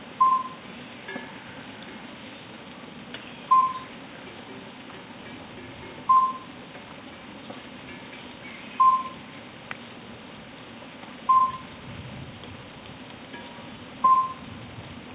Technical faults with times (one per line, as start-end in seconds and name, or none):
none